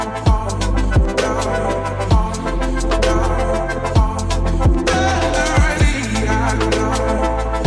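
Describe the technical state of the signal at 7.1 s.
At 7.1 s the signal is intact, with no audible dropout, distortion, glitch or other technical fault at that moment.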